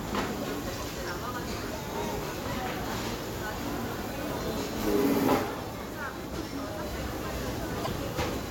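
From 7.83 to 7.88 s the sound breaks up briefly, about two 26.1 ms frames, likely a broken MP3 bit reservoir after frames were cut.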